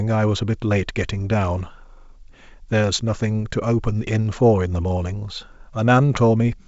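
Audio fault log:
No audible faults found.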